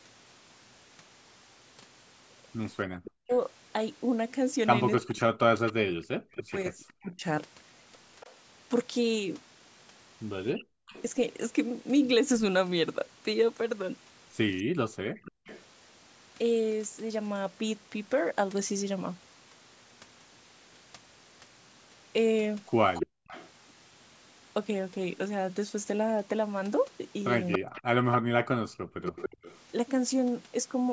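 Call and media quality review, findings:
Speech suppressed in double talk, 2.89–7.24 s, 10.53–10.95 s, 27.58–29.15 s. Likely the echo canceller mistaking overlapping talk for echo and ducking it. Speech dips by up to about 40 dB, totalling roughly two seconds in the first span.

Echo leak, 3.04–11.02 s, 15.24–15.64 s, 22.94–23.5 s, 27.52–29.58 s. Likely residual loudspeaker pickup passing the far-end canceller. A delayed copy trails the speech by 278 ms, faint early on and nearly as loud as the speech around 23 s.

Background gated by the echo canceller, 14.63–15.45 s and 23.07–23.28 s. The canceller clamps the microphone while the loudspeaker plays. Room sound drops by about 40 dB, then returns once the canceller releases.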